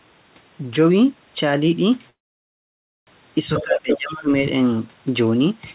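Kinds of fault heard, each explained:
Call audio freeze: From 2.1 to 3.09 s the sound stalls for nearly a second, mostly silent, then resumes exactly where it stopped. This is likely packets held up until the jitter buffer ran dry. Unlike a dropout, nothing is lost; a gap is inserted instead.
Other side's voice leaking through: A second voice intrudes, once very briefly at 3.58 s and again from 3.91 to 4.14 s, about 10 dB and then about 5 dB below the talker. This is likely loudspeaker echo the canceller missed. It adds a voice rather than removing the talker.
Speech suppressed in double talk: From 3.61 to 4.30 s, while the far voice is present, the talker dips by as much as about 20 dB over roughly 0.7 s. This is likely the echo canceller clamping down during overlap. Unlike a freeze, the speech keeps moving but sounds pushed down.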